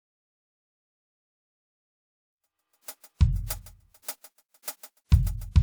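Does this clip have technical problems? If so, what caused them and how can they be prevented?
No, this music clip has no technical problems, so there is nothing to prevent.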